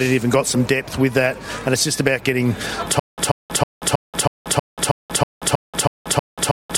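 At about 3.0 s the playback breaks into a stutter with silent gaps that runs to the very end. A fragment of roughly 137 ms keeps coming back, then a dead-silent gap of about 182 ms, so the burst repeats every 320 ms or so. That's the sound of a stalled player or stream, likely retrying, replaying its last chunk and then starving. Whatever should have played after 3.0 s is simply gone.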